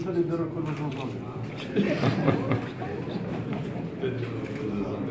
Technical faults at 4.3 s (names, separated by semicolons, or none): none